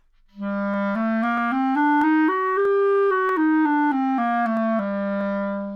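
A mismatch of roughly 300 ppm between two device clocks likely forces clock drift buffer slips in this sound clip, giving a regular click every 0.64 s from 0.74 to 5.21 s.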